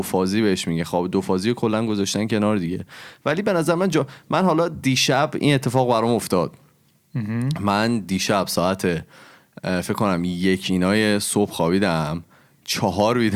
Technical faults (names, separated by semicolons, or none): none